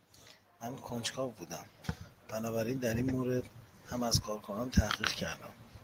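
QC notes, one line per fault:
2.34–4.80 s, automatic gain rising: the level climbs steadily by about 4 dB over roughly two and a half seconds, and the speech and the room noise behind it swell together rather than the speech alone getting louder. That shared lift is the signature of automatic gain control, which judged the input too quiet and ramped its gain up gradually instead of in a step, so the change reads as a slow swell.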